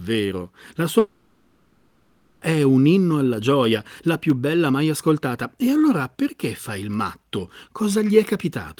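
At 0.99 s the speech cuts out until 2.43 s, about 1.4 s, which is likely a long network dropout. The receiver fills the gap by stretching the last sound into a fading buzz or hiss. The speech resumes with that portion lost.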